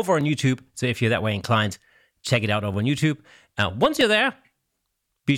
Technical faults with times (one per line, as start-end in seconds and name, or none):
0.21-5.28 clock drift buffer slips